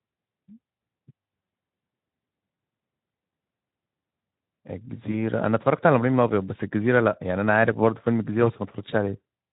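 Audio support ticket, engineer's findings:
VoIP packet loss concealed by the speech codec, 5.11–5.14 s. Symptom: brief buzzy tone or coloured noise replacing the sound, gain sagging, then weak or rough onset as audio resumes. Mechanism: decoder repeats last pitch and filter while fading, and later frames build on that guessed state. Duration points to a single lost 20 ms frame. Not a plain dropout: no silent gap or click, just a stretched tone or noise. Light Speex coarseness throughout.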